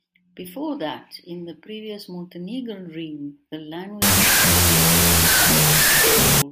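Speech, with a wrong sample width fault from 4.02 to 6.42 s, right after "realm the". Loud noise swamps the sound, which is buried, at half speed and lower pitch. That fits 32-bit float data read as 16-bit integers.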